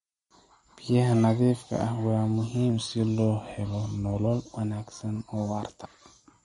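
Speech, carrying plainly audible MP3 compression throughout. Nothing survives above 11.2 kHz, and the watery, swirly texture fits a low bitrate around 48 kbps. A plain low-pass filter would not cause that swirl, which comes from the encoder dropping weak frequency lines and restoring them frame to frame. From 2.70 to 4.26 s the audio slows by about 5.4% and drops nearly a semitone, about 96 cents, then snaps back. This is likely a drift correction step. Wow or flutter would waver continuously, but this shift holds one steady offset with abrupt edges.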